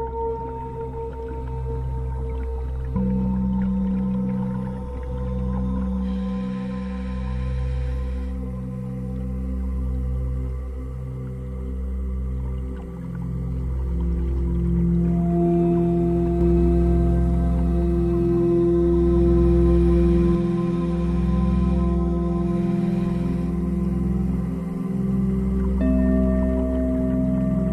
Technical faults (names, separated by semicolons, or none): doubled audio track